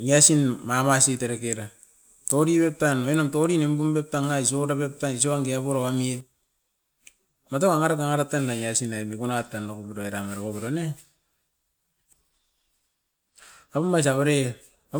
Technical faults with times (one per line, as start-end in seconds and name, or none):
none